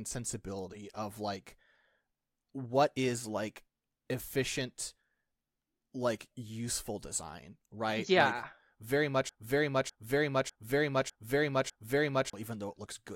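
At 9.29 s the speech locks into a broken-record loop: a 0.60 s fragment repeats exactly, back to back, five times until 12.33 s. The likely cause is a stalled player or stream resending its last buffered piece, so the intervening audio is lost.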